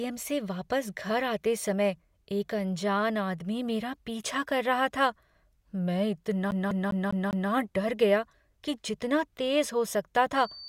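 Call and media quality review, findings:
CD stuck on one turn, 6.51 to 7.51 s, just before "डर गया कि जितना". The same 200 ms slice of speech repeats 5 times with a tiny mute at each jump. A scratch is knocking the laser back a track every revolution. Disc playback side.

Loudspeaker feedback squeal, 10.35 s to the end, right after "जितना तेज हो सकता". A 4.6 kHz tone swells over roughly a second to around 5 dB above the speech. A mic is picking up its own loudspeaker, and loop gain goes past one at that frequency. Check room or monitor routing.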